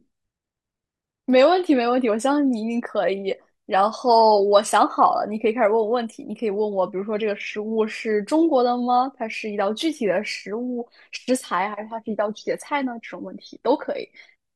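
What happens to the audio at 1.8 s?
Nothing goes wrong at 1.8 s; the speech runs through that moment intact, with no dropout, click or other fault.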